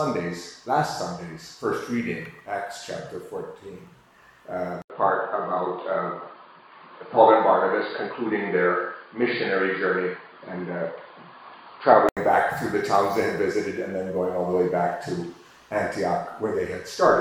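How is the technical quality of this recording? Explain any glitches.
There's one real glitch here. From 4.82 to 12.17 s, after an 80 ms dropout, the sound goes dull and boxy with nothing above 4.8 kHz, plus a faint new hiss well under it, at about the same level. That's likely the input switched to a poorer device, a narrower-band mic, before switching back.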